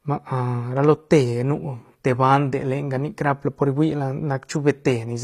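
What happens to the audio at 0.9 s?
The speech was likely squeezed through HE-AAC compression at a low bitrate, around 24 kbps, and at 0.9 s, as throughout, the rebuilt treble sounds gritty and metallic on s sounds, with nothing above 14.9 kHz.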